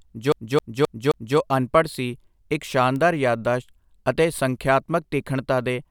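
From 0.32 to 1.38 s the speech locks into a CD stuck on one turn. The same 0.26 s slice of audio plays four times, with a brief mute at each jump, before the speech moves on to "ਅਨਪੜ੍ਹ ਸੀ ਇੱਕ". A scratch sends the laser back one track on each rotation, so the repeats are evenly spaced. That strict regularity sets it apart from an irregular network-buffer stutter.

At 2.96 s, just after "ਅਨਪੜ੍ਹ ਸੀ ਇੱਕ", a bit error spike gives a single sharp tick. One flipped bit throws one sample's value by a power of two before it snaps back. Unlike a vinyl click, it is one sample wide, broadband and unrelated to the speech.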